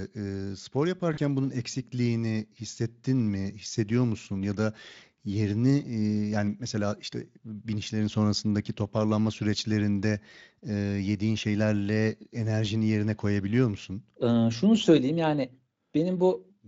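VoIP packet loss concealed by the speech codec, at 1.13 to 1.19 s in this Speex-coded speech, just before "bunun eksikliğini hissettin": about 40 ms went missing, fitting two lost frames, and the decoder filled the gap by extrapolating from its last pitch and filter with falling gain.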